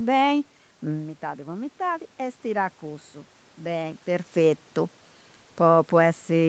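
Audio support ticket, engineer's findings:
Level and room noise swell together, gradually, 0.86 to 4.63 s, after the voice drops about 10 dB around 1 s as the talker moves back. Automatic gain rising in the call microphone processing: AGC detects quieter input and ramps gain up about 5 dB over roughly 3.8 s, lifting background along with voice. Talker shifts again near 4 s. Top end stops at 8 kHz, consistent with Opus wideband on the call path.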